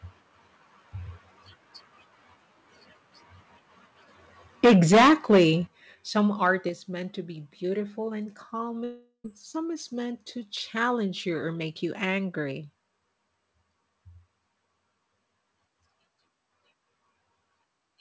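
Microphone overload begins at 4.64 s and runs to 5.44 s. The peaks are driven about 13 dB past full scale, and roughly a fifth of the samples are flattened against the converter's ceiling. This is most likely an input gain set too high. With the tops of the waveform sheared off, the loudest syllables take on a harsh, crackly, buzzing edge.

Microphone volume stepped down occurs at 4.66 s, about 2 dB, just after that overload starts. It happens again at 5.67 s, about 9 dB, and at 6.69 s, about 6 dB. Each is likely the call software's automatic gain control reacting to the distorted peaks by cutting the device's input level in a single jump. Voice and background together drop abruptly at each point, with no gradual fade.

A second microphone overload, much briefer, falls between 6.45 and 6.48 s. It overshoots by about 2 dB with around 2% of samples clipped, giving only a short rasp.

A long network dropout runs from 8.84 to 9.26 s, with 400 ms of audio lost, likely to a gap in packet delivery. 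The receiver stretches the last received sound into a fading, buzzy tail for about 0.4 s. A short silence of about 80 ms follows before the sound resumes further on, with the missing stretch simply gone. Throughout, the call codec's band limit leaves nothing above 8 kHz, which fits G.722.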